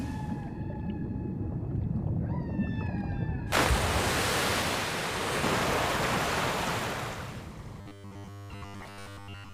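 From 7.81 s to 9.53 s the audio turns into robotic sound from repeated short buffers: a rigid, metallic buzz locked at 100 Hz, which fits 10 ms segments being replayed while fresh audio arrives too slowly, the likely cause being buffer underruns. Roughly two-thirds of that stretch is repeated material. Unlike a mains hum, the buzz still tracks the rough shape of the underlying sound, and real audio is skipped rather than masked.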